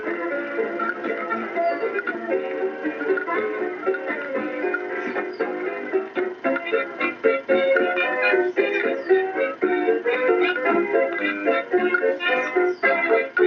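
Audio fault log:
Throughout: noise suppressor applied to music or sounds. Level pumps and flutters as held parts of the sound sink while sharp onsets stay clear, and tails and ambience thin out, with the gain swinging by around 10 dB. A suppressor tuned for speech is still active. It treats sustained tones and reverberant decay as steady background noise and keeps pulling them down, letting only transients pass at full strength.
4.49–6.44 s: sound cut by the noise suppressor. The sound dips for roughly a second and a half of this stretch. The drop reaches about 4 dB at its deepest, and fading portions lose their natural decay early. Here the suppressor judged this passage to be noise and attenuated it harder than its surroundings. Steady and decaying material bore the cut, while any abrupt attacks came through largely intact.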